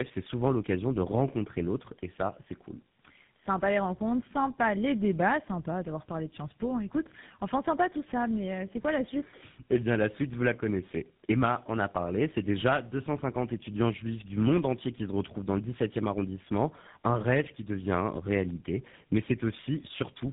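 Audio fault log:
throughout: tandem speech coding. The speech is rough, muffled and warbly, consistent with about three speech codecs in a row, the last fitting GSM full rate, each re-coding the previous one's damage. A spectrogram shows nothing above 3.8 kHz and smeared, blotchy harmonics.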